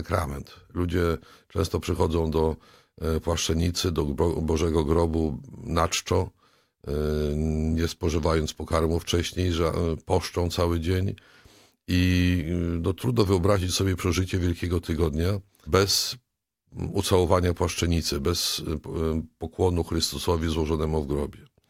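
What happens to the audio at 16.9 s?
Nothing goes wrong at 16.9 s; the audio plays through that moment intact, with no dropout, click or other disturbance.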